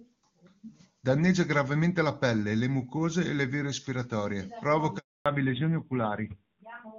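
Speech, carried over a phone call, with two linked faults near the end. The first is a handover gap. At 4.98 s the sound fades out within a few tens of milliseconds and stays silent for 280 ms, until 5.26 s. The call was moved between networks, and no speech frames arrived while the switch happened. Whatever was said in that window is gone. Up to this point the HD Voice path sounds clean, with the full band up to 7 kHz present and faint codec damage at most. That points to a high AMR-WB rate, around 23.85 kbit/s. The second fault is a fallback to narrowband. It begins at 5.26 s, right after the gap, and lasts to the end. Nothing above 4 kHz remains. The voice turns duller, and the roughness fits a low-rate AMR-NB mode near 7.4 kbit/s. The call dropped from HD Voice to the older narrowband codec.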